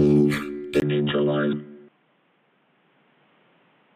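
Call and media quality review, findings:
0.8 s onward: 20 ms gap, then nothing above 3.8 kHz, slightly quieter, new faint noise. Likely input switched to a poorer device; the changed noise floor points away from codec band-limiting alone.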